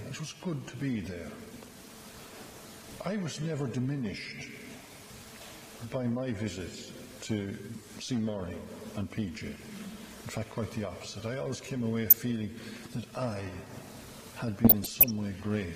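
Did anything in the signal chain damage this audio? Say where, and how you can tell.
Yes: DAB burbling at the codec stage, at 9.37–9.66, 12.06–12.13 and 14.64–15.10 s. Reception errors corrupt MP2 sub-band samples and levels, causing short noise blips rather than silent dropouts.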